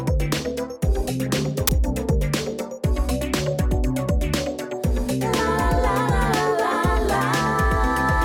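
At 1.67 s the decoder runs into a block of embedded file data, in this case a compressed cover picture, and plays its bytes as if they were audio samples. This is file tags played as audio. Because compressed image data looks statistically random, the samples it produces are random too, giving a brief burst of very loud white noise. The burst lasts only about 14 ms and starts and stops with hard edges, so it sounds like a sharp crack of static.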